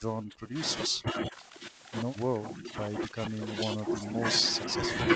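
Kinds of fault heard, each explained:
Speech suppressed in double talk: the voice is pulled down in level or broken into pieces, most deeply early on, about 30 dB, with shallower dips near 1.0, 2.4 and 3.1 s, likely an echo canceller ducking the near talker while the far side also speaks.
Echo leak: a faint delayed copy of the voice, about 30 dB below the speech, surfaces briefly around 3.1 s, trailing the original by roughly 316 ms, likely residual loudspeaker echo that the far end's canceller failed to remove and sent back.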